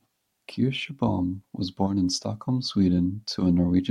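No technical faults can be heard anywhere in the recording.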